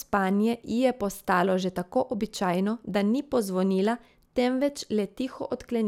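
No technical faults are audible.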